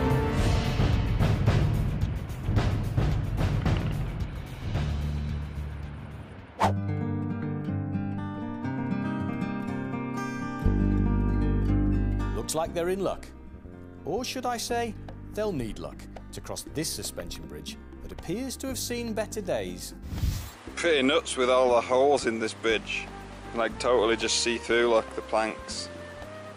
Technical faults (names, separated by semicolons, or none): de-emphasis applied wrongly